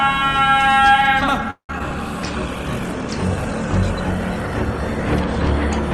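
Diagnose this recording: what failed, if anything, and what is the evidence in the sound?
A call audio freeze sits in the network and jitter-buffer stage. From 1.50 to 1.70 s the last sound is stretched into a fading buzz, then about 0.1 s of silence. Packets were likely delayed, not lost. The waveform shows a decaying tail and flat gap, then resumes with everything intact but about 186 ms later.

Two instances of short concealed packet loss follow, at 1.72 s and from 1.79 to 1.81 s, again from the network. About 20 ms and 10 ms never reached the decoder in time, so the receiver extrapolated the preceding sound and crossfaded back. Each is a brief smear or wobble, visible as a tiny smooth patch in the waveform.

A call bitrate drop runs from 2.32 s to the end, in the codec stage. The bandwidth estimate fell and the Opus encoder went from 64 to 20 kbps, holding its lowest rate for about 2.4 s. 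The sound turns rough and watery, and a spectrogram shows coarser, blotchier detail than before.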